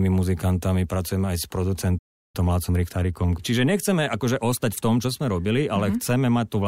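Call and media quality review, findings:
Playback stall, 1.98 to 2.36 s: speech cuts off mid-flow, 0.36 s of silence before output resumes. Likely player buffer starvation or blocked audio thread. Waveform: flat gap. Spectrogram: blank vertical band across all frequencies.

Time-compressed catch-up, 2.36 to 5.36 s: speech hurried at 1.1x, pitch unchanged. Player draining backlog by removing small segments and cross-fading joins. Waveform: syllables and pauses packed closer. Spectrogram: harmonics stay at the same frequencies while events crowd together.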